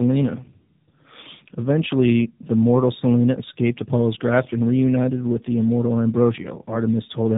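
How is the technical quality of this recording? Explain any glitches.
The recording is degraded from start to finish by tandem speech coding. The speech has passed through two low-rate speech codecs in a row, which fits a G.729A stage followed by an AMR-NB stage. Between them it was likely carried as plain G.711 telephone audio. Each codec re-encoded the damage left by the one before. Nothing reaches above 3.8 kHz. The result is muffled, rough and warbly, worse than one codec alone.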